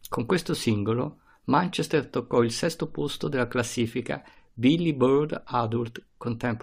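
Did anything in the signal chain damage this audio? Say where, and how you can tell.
No, no damage is audible.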